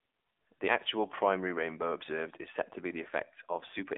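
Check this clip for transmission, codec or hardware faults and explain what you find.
One codec fault runs through the whole clip: the speech has passed through the AMR narrowband mobile codec, AMR-NB, at a low rate that fits about 7.4 kbps. A vocal-tract model driven by sparse pulses replaces the waveform, and the phone line keeps only 300 Hz to 3.6 kHz, leaving nothing above 3.8 kHz. The result is muffled, buzzy, plainly synthetic-sounding speech.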